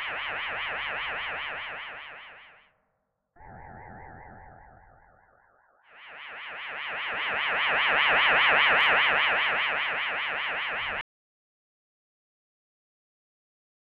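At 11.01 s the sound stops abruptly, mid-flow, and never returns. This is an audio dropout to silence. From that point to the end of the clip, nearly 2.9 s, there is complete silence. No room tone or background hiss remains, so the gap is not a quiet passage. The input was likely lost, through a disconnected device, a failed link or an accidental mute, while recording continued and wrote silence. Whatever happened after 11.01 s is gone.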